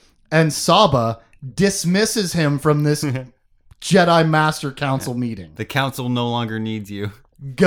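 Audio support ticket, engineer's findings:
No faults found in the speech clip; nothing to report.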